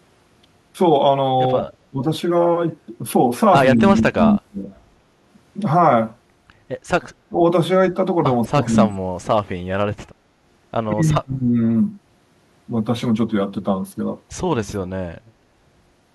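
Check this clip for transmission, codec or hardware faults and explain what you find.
There's one recurring problem: speech suppressed in double talk, at 1.9–2.02, 3.76–4.67, 7.29–7.38, 8.44–9.31 and 10.92–11.59 s. The speech dips hard, deepest around 8.4–9.3 s, likely because an echo canceller mistook near-end talk overlapping far-end audio for echo.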